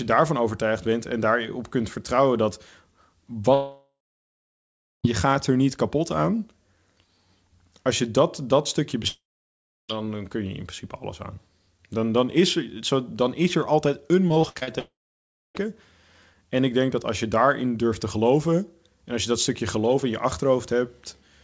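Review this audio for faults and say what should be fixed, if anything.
Long network dropout at 3.54 to 5.06 s, 9.08 to 9.91 s and 14.79 to 15.57 s: the sound smears into a fading buzz, then goes silent for about 1.09 s, 0.68 s and 0.62 s before resuming. The likely cause is a stalled stream, with about 1.5 s, 0.82 s and 0.76 s of audio never played.

Repeated packet loss (robotic sound) at 14.29 to 14.69 s: the sound turns choppy as six short holes, the longest 64 ms, are patched by stretching the previous sound. About 41% of that stretch is filled-in rather than real audio. The G.722 call path leaves nothing above 8 kHz throughout.

To prevent both, stabilise the network link and enable forward error correction or a deeper jitter buffer so brief losses are recovered rather than concealed.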